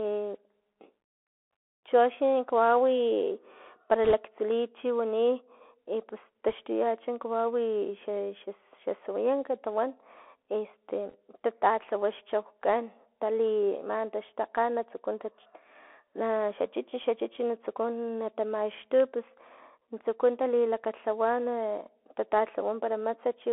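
Bluetooth CVSD headset codec damage runs through the whole speech clip. The encoder sends one up-or-down bit per sample, which fits a 64 kbps CVSD stream, so the band is held to roughly 300 Hz to 3.4 kHz. Its adaptive step lags on loud, bright sounds, giving scratchy sibilants, slope distortion and a granular hiss beneath the speech.

Bit errors on a Bluetooth voice link come in at 4.04 to 4.14 s, at 6.51 s and at 11.09 to 11.15 s. They land at a rate of about 2 percent, then under 1 percent, then about 1 percent. Each corrupted bit nudges the step only slightly and the error decays, so there are no sharp clicks, just brief rushing crackle that is heaviest in the first burst.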